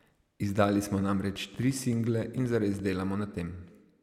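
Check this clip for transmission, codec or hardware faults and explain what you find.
One fault is present: a train of clicks in the speech from 1.36 s to 2.80 s. Around fifteen sharp clicks arrive at about 8 per second, with uneven spacing. Each has much the same shape. They sit on top of the speech, roughly as loud as it, and tick through the gaps too. The likely cause is interference from nearby equipment, or a faulty connection or power supply injecting repeated pulses into the signal.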